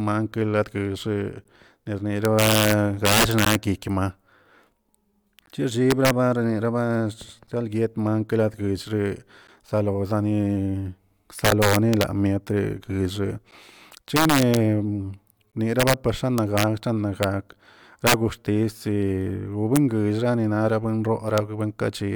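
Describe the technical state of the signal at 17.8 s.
At 17.8 s the speech carries integer overflow, which runs through the whole clip rather than starting there. The signal is pushed about 9 dB past the top of the integer range. Any peak beyond that limit wraps to the opposite sign instead of being held at full scale. Only a small fraction of samples, under half a percent, go over. Each one swings across the full range, so loud moments produce violent cracks far harsher than clipping.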